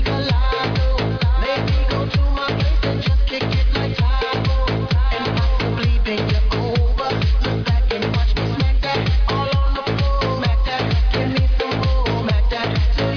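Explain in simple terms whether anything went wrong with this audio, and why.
Aliasing runs through the whole clip. The sound was converted to a much lower sample rate, which points to about 11 kHz, without first removing the high frequencies. Anything above 5.5 kHz folded back as false, unrelated tones, giving hissy sounds a gritty, metallic edge.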